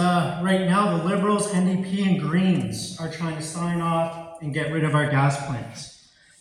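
From 5.08 s to the end, de-emphasis has been applied wrongly: a treble cut intended to reverse pre-emphasis acts on material that never had that boost, or has been applied twice. The response rolls off smoothly above the midrange, reaching about 14 dB down at 10 kHz relative to 1 kHz, leaving the sound dull and muffled.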